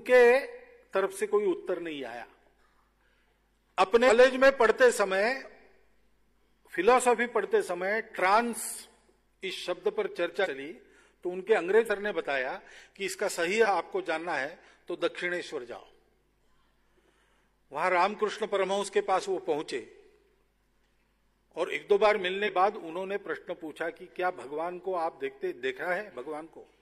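At 4.04, 10.41, 11.85, 13.61 and 22.43 s the audio jumps forward, the sign of compressed frames skipped. Whole 46.4 ms frames never reach the output, so the sound resumes later than it should, losing roughly a tenth of a second to nearly half a second each time, the longest at 11.85 s. Unlike a dropout, there is no silent gap; the sound simply jumps ahead.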